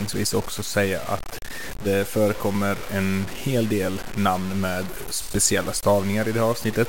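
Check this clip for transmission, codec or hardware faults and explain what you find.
Low bit depth without dither runs throughout the speech, from start to finish. The likely cause is a quantiser keeping only about five bits and truncating rather than rounding, with no dither to decorrelate the error. The error tracks the signal, sitting roughly 15 dB below it, so the speech carries a coarse, grainy distortion that shifts with every syllable, and the quietest passages crumble into sputtering between adjacent steps or drop out.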